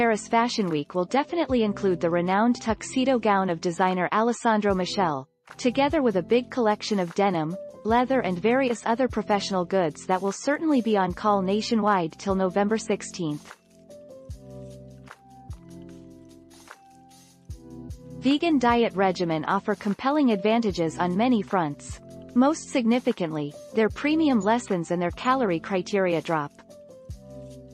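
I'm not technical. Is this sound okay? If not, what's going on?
Yes, this sound is okay, with nothing going wrong that needs explaining.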